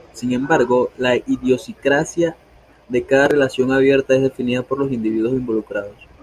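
Nothing stood out on listening to this speech recording.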